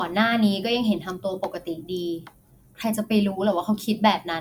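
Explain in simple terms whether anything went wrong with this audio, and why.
Nothing went wrong here: the speech comes through steady and intact, with no dropouts, glitches or distortion to point to.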